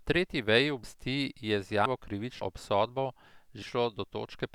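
Four abrupt jumps break up this speech clip, at 0.84, 1.86, 2.42 and 3.62 s. Each one is the sound lurching forward with no gap, so a chunk of speech just vanishes. The ones at 0.84 and 2.42 s lose about a tenth of a second, and the other two lose roughly a third of a second and can clip part of a word. These are most likely dropped buffers (overruns), where the samples were overwritten before the software collected them.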